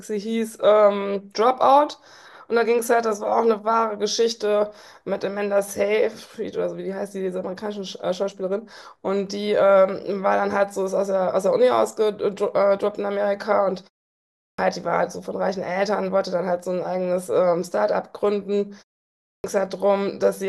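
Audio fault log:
14.27 to 14.59 s and 19.14 to 19.44 s, clipped start after a pause: after short silences of 0.46 s and 0.39 s, the output device drops into an idle state and needs time to wake, so the first 310 ms and 300 ms of speech are swallowed and each phrase bursts in mid-sound with no onset. On the waveform, flat silence jumps straight to speech level; the spectrogram shows energy appearing abruptly across all bands, with no gradual attack.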